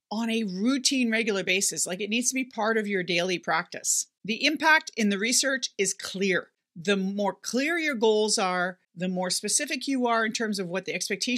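Speech recording with no technical faults to report. Nothing heard anywhere in it calls for a time or a cause.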